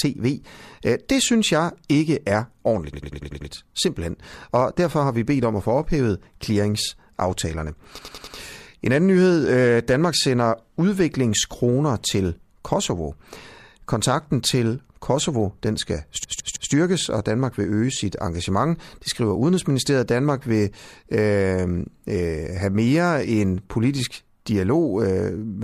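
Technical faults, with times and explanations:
2.93–3.50 s, 7.98–8.37 s, 16.24–16.72 s, repeated frames: rapid stutters as a short block of compressed frames replays, 96 ms six times, then four times, then 160 ms three times, lengthening the audio.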